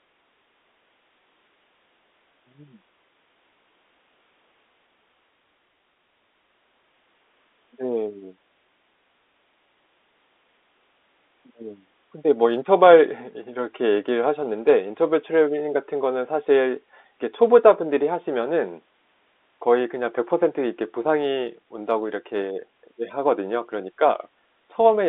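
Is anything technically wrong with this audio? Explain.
No, the speech comes through as ordinary G.711 telephone coding, with its narrow band of roughly 250 Hz to 3.6 kHz and at most a faint codec hiss that follows the level of the voice, and nothing beyond that normal telephone character stands out.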